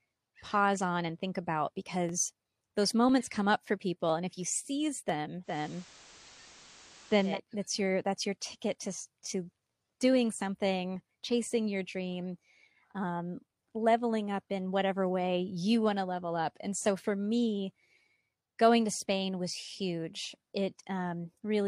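A speech clip with digital radio blending to analogue from 5.43 to 7.39 s. The receiver lost its digital stream and cross-faded over 160 ms to the FM broadcast. Faint hiss appears, roughly 25 dB down. The level holds steady. It then blends back.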